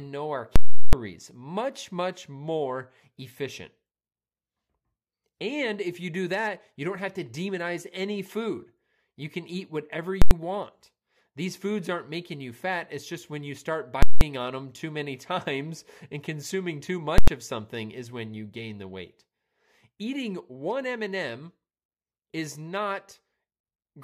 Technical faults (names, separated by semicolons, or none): invalid numbers at full scale